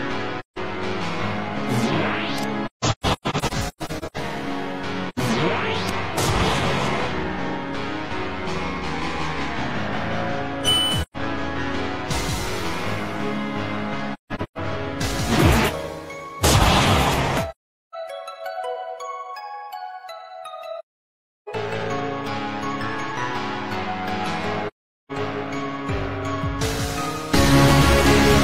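AAC frame loss with muting recurs at 0.39 to 0.58 s, 2.65 to 4.17 s, 5.09 to 5.19 s, 11.02 to 11.17 s, 14.13 to 14.58 s, 17.50 to 17.95 s, 20.79 to 21.48 s and 24.67 to 25.12 s. Lost frames were decoded as silence, and the overlapping windows taper the sound into and out of each hole. At 2.65 and 14.13 s the dropouts are scattered, with the longest run roughly 150 ms.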